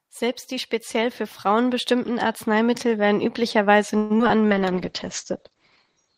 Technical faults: repeated packet loss (robotic sound); call bitrate drop

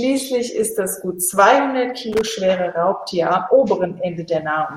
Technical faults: loose connector crackle

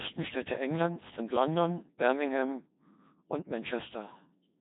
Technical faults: Codec 2 vocoder

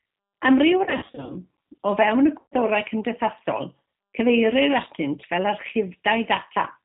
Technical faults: G.729 codec; VoIP packet loss concealed by the speech codec

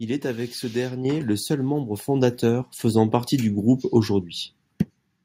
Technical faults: microphone volume stepped up

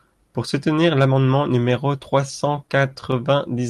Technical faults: scattered short gaps

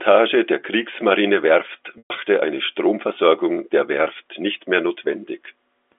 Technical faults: packet loss with pitch repetition

